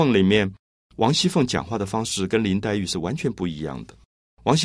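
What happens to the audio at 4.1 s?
Nothing goes wrong at 4.1 s; the speech continues intact through that moment with no audible fault.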